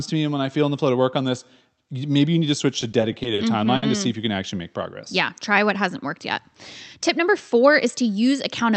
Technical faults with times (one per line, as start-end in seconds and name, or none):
2.81-3.40 repeated stalls (stutter)
3.76-3.84 short stall from a late packet